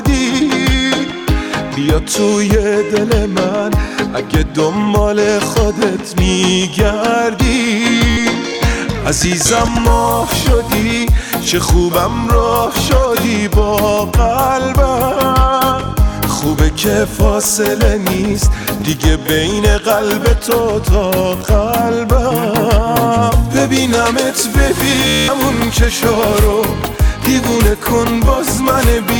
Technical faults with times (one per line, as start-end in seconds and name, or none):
8.10-8.17 Bluetooth stutter
25.07-25.29 Bluetooth stutter